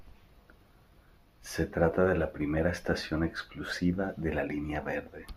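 Nothing stood out as a technical fault on listening to the speech in this clip.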